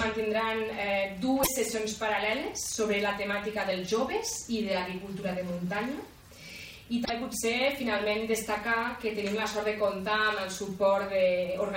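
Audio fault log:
1.40 to 1.48 s and 7.02 to 7.10 s, damaged data in a compressed stream: two brief blips of about 80 ms each. Corrupted bytes in the encoded stream made the decoder misread those frames and lose sync until it locked onto the next valid frame header.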